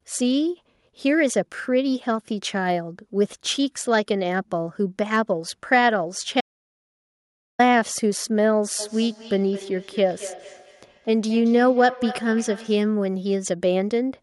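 At 6.41 s the speech cuts to an audio dropout to silence, lasting 1.18 s until 7.59 s. No room tone remains. A lost input link is the likely cause.

From 8.79 s to 12.92 s there is feedback echo between two devices. Each word returns about every 200 ms, thinner each time, peaking about 15 dB below the speech.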